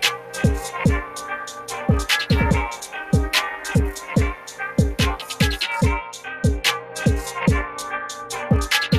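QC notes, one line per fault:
Throughout: noise suppressor applied to music or sounds. Held material and decaying tails keep sinking while onsets push through, so the level pumps and thins, swinging by roughly 10 dB. A speech-tuned suppressor was left running and is treating steady tone and ambience as noise.
Throughout: overlap-add ripple. A metallic buzz of about 11 dB rides over everything, on the order of 300 times a second, giving extra tones around each note. The frames were windowed and rejoined with an overlap that doesn't sum to constant gain, so level dips once per frame.
0.17–0.35 s, 4.35–4.6 s, 6.8–6.96 s: sound cut by the noise suppressor. In each span the sound drops away by up to about 7 dB (about 6 dB at 6.8 s), lasting roughly 0.15 to 0.3 s. The suppressor judged these sounds to be noise and pulled them down harder than the surrounding audio.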